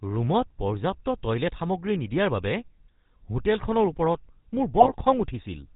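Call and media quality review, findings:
GSM full-rate codec, throughout. Buzzy, gravelly roughness, nothing above 4 kHz; consistent with 13 kbps full-rate coding. Vocal-tract filter excited by regularly spaced pulses, every third excitation sample kept, so speech loses fine detail and turns coarse.

GSM bit errors, 4.8–4.92 s. Brief squawk/gargle burst on the same codec path. Corrupted filter, pitch or gain parameters distort spectrum and level per frame; damage spans about six 20 ms frames, suggesting a bit error rate of a few percent.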